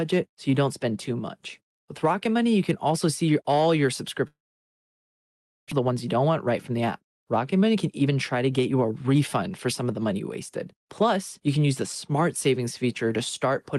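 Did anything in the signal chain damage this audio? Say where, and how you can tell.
Yes. From 4.27 to 5.74 s the sound smears into a fading buzz, then near-silence. This is likely a long network dropout that lost about a second of audio.

At 5.81 to 6.78 s, 7.54 to 10.16 s and 10.73 to 11.83 s the sound hurries, 6 to 9% faster at unchanged pitch. This is jitter buffer speed-up trimming pitch periods.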